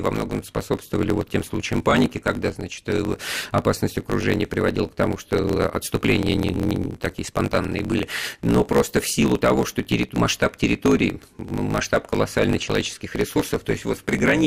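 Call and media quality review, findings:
Block size mismatch (truncated), whole clip: steady 54.4 Hz buzz, speech running 1.16x fast at near-normal pitch. Buffer handoff between stages. Writer's blocks, consistent with 1024 samples, exceed reader's block size, so each block's tail is discarded.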